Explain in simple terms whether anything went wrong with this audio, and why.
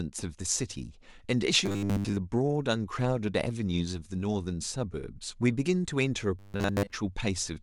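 New audio likely reached the playback software too slowly at two moments, from 1.66 to 2.18 s and again from 6.39 to 6.92 s. To fill the gaps, it kept replaying the same tiny 10 ms slice while most of the real speech was skipped. This is robotic sound from repeated short buffers: the constant repetition forces a steady 100 Hz buzz, so the speech turns metallic and machine-like while loosely keeping its rhythm.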